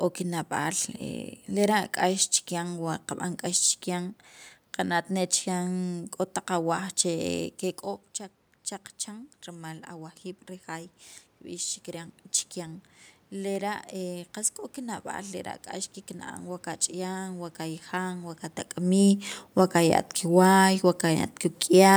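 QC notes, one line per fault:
9.05–18.42 s, automatic gain rising: once the voice dropped about 13 dB when the talker moved at roughly 7.5 s, the gain control crept up about 9 dB over nine seconds, so voice and room noise swell together.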